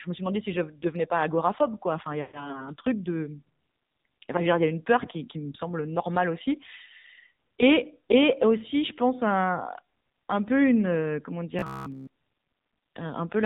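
Throughout, the speech has passed through the AMR narrowband mobile codec, which samples at 8 kHz and rebuilds the voice from a vocal-tract model and sparse pulses. Nothing above 4 kHz survives, and the plainly buzzy, synthetic texture suggests a low rate, around 7.4 kbps.

From 2.22 to 2.64 s, lost AMR speech frames left the decoder without about 120 ms of fresh data. It reused the last pitch and vocal-tract settings at falling gain, so the sound smears, fades briefly, then returns weak and rough.

From 11.59 to 12.07 s comes robotic sound from repeated short buffers, likely caused by audio arriving too rarely while the last fragment was replayed. Most of that stretch is repeats, imposing a rigid 66.7 Hz metallic buzz, which fits a roughly 15 ms buffer.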